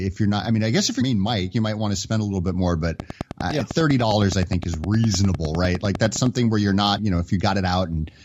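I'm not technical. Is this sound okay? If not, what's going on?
No. At 1.00 s and 6.98 s there is damaged data in the compressed stream. The player loses its place in the file and recovers, leaving a brief glitch each time. From 3.0 s to 6.27 s there is a train of clicks, likely from electrical interference or a faulty connection: about thirty evenly spaced ticks, nearly ten per second, over the speech.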